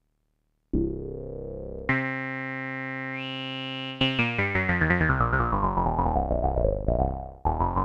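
Nothing stood out as a technical fault at any point in the recording.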